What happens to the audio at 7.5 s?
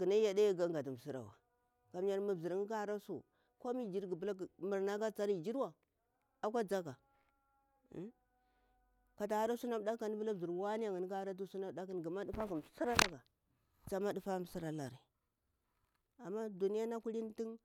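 Nothing goes wrong at 7.5 s; the speech there plays through intact, with no dropout, click, distortion or other fault at that point.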